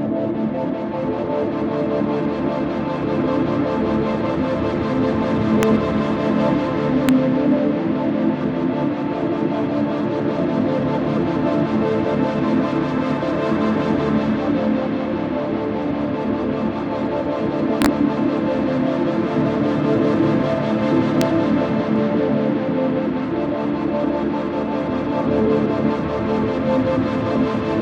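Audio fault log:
5.63 s, 7.09 s, 17.82 to 17.86 s and 21.21 s: integer overflow. Loud peaks reach past the largest integer value. They wrap to the opposite sign instead of being held at the limit. Each wrap jumps across the full range, giving violent cracks far sharper than clipping.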